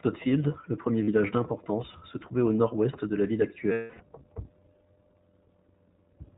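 iLBC codec coding runs through the whole clip: this narrowband VoIP codec codes each 20 ms frame on its own and passes nothing above 4 kHz, leaving the speech plainly rough and synthetic, with dull, band-limited highs. The texture fits the 15.2 kbps mode.

Lost iLBC frames come at 1.04 to 1.09 s, after "le premier" and before "d'importance se trouvait au", and at 3.72 to 4.02 s, after "de la ville". Each time the decoder repeated the last pitch cycle blended with noise. The 40 ms gap is a brief held, slightly buzzy or breathy vowel, consistent with two frames. The 280 ms gap is a longer, fading held vowel. The voice is right again almost immediately after each.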